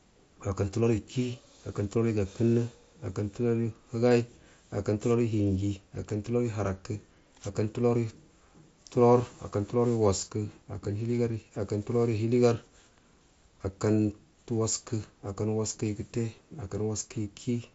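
No faults turn up anywhere here; the speech just comes across the way a Bluetooth headset on the mSBC codec hands it over, with nothing above 7.7 kHz.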